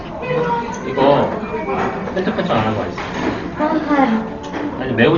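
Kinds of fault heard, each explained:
Dolby Digital compression: the sound is dull, with nothing above 6.9 kHz, and heavy, rough fluttering noise around tones. Unlike simple low-pass filtering, that noise points to likely AC-3 coding at a very low bitrate, around 32 kbps.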